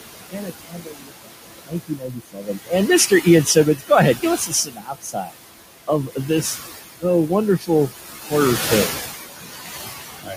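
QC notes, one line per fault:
Throughout: noise suppressor artifacts. The background sinks in the gaps and swells back under the speech. The suppressor pulls steady-noise bands down by about 14 dB frame by frame, against room noise sitting only about 11 dB below the speech.
0.31 to 2.72 s, 3.77 to 3.91 s, 4.16 to 5.36 s, 7.59 to 7.69 s, 10.22 to 10.36 s: speech cut by the noise suppressor. Soft sounds and endings come out swallowed and faint, most heavily in the first and third stretches, where roughly a second and a half, then under a second, of speech is affected. The suppressor mistakes quiet speech for noise and turns it down by as much as about 18 dB, and by about 11 dB in the brief dip near 7.6 s.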